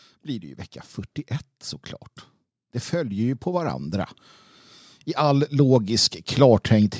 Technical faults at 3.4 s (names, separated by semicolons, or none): automatic gain rising